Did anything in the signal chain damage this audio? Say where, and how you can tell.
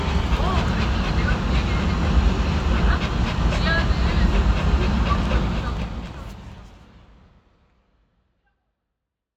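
No, no damage is audible.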